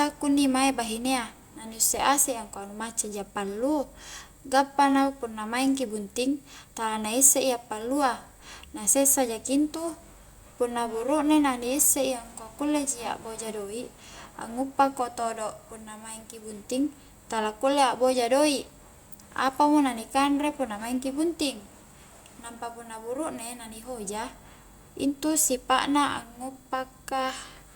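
Nothing in this speech recording points to a technical fault anywhere in the signal.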